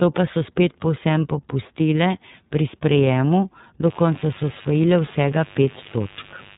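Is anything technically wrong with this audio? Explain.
Yes, there are two faults. Throughout, the iLBC codec limits the speech to below 3.8 kHz and codes each 30 ms frame independently, which fits its 13.33 kbps mode. The result is clearly rough and synthetic rather than just muffled.

From 3.81 s to the end, after "povsem popustile pri sprejemu", mains buzz appears. Switching spikes twice in every 50 Hz cycle create harmonics into the kilohertz range, so it sounds like a raspy buzz, not a smooth hum. It sits roughly 20 dB below the speech.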